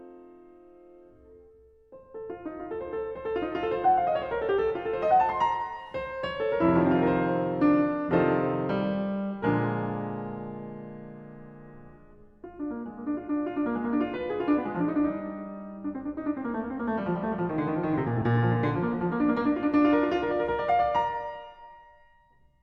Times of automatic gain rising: none

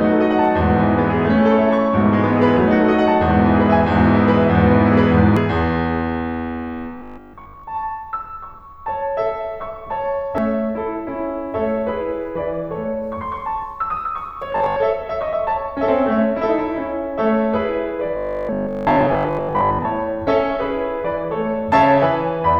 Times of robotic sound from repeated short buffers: 6.98-7.64, 14.52-14.82, 18.17-19.87

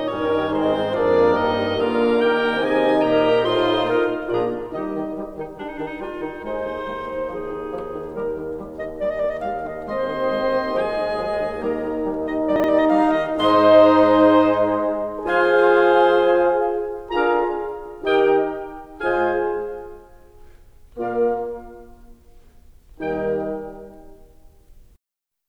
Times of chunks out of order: 12.56-12.64

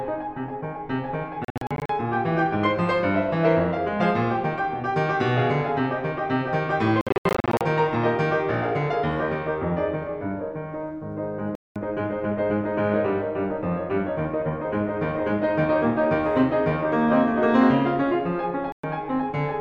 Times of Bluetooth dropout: 1.45-1.90, 7.01-7.61, 11.55-11.76, 18.72-18.84

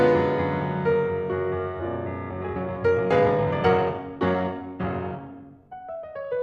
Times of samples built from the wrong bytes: none

